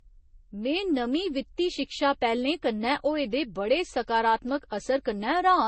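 Speech, likely transcoded between lossy codecs, an MP3 stage then Vorbis, both consistent with low bitrates near 32 kbit/s, so stacked coding artefacts smear the sound throughout and nothing survives above 8.3 kHz.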